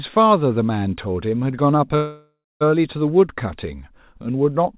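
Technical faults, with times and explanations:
1.96 to 2.63 s, call audio freeze: a fading buzz ending in 0.22 s of silence, then speech resumes intact, likely because delayed packets emptied the jitter buffer.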